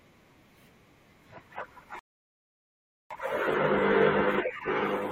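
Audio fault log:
1.99 to 3.11 s, rebuffering stall: the speech halts mid-flow and drops to silence for about 1.11 s, then picks up at precisely the point where it broke off. The player had exhausted its downloaded audio and waited for more to arrive before continuing. Unlike a dropout or packet loss, where a piece of the sound vanishes and the speech jumps ahead, nothing here is skipped. The gap simply inserts extra time, stretching the clip.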